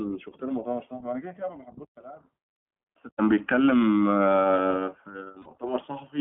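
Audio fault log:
Throughout: iLBC codec. Narrowband speech squeezed to about 150 Hz–3.5 kHz, so it's dull up top and audibly rough and synthetic. That fits 20 ms frames at 15.2 kbps.
5.42–5.48 s: lost iLBC frames. A 40 ms gap comes out as a held, slightly buzzy vowel where the decoder repeats the last pitch cycle, then the speech snaps straight back.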